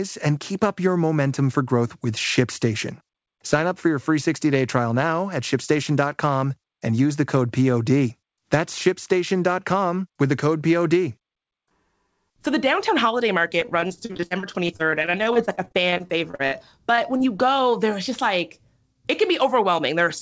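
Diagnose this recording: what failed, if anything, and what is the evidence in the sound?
Repeated packet loss (robotic sound), network stage. From 13.60 to 16.54 s, packets went missing again and again, with gaps up to 44 ms. The receiver bridged each by extending the preceding sound, concealing about a fifth of that stretch, so the speech turns choppy and robotic.

Short concealed packet loss, also network. Brief isolated holes at 16.96–16.99 s, 17.17–17.21 s and 17.37–17.40 s, each around 20 ms of lost audio, were patched from the last sound and blended back, leaving small smears or wobbles within the G.722-style band that stops at 8 kHz.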